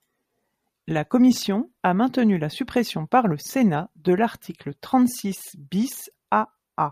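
No technical faults can be heard in the speech at any point, so there is nothing to describe in time order.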